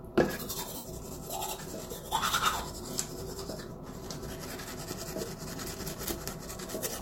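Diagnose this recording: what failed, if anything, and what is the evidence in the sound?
Lost LE Audio frames in the Bluetooth codec: at 0.76–0.85 s, 3.70 s and 6.31–6.33 s, the decoder repeats prior spectrum with random signs, smearing tones into noise.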